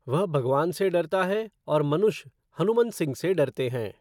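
No technical fault can be heard anywhere in the speech recording.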